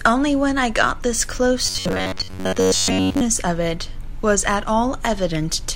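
From 1.66 s to 3.21 s the speech turns into a rigid, metallic buzz pitched at 93.8 Hz, still loosely tracking the syllables. This is robotic sound from repeated short buffers. The likely cause is audio arriving too infrequently, with the playback side filling the gaps by looping a fragment of about 10.7 ms. That period sets the fixed buzz pitch. Roughly 70 percent of the sound in this stretch is repeated rather than new.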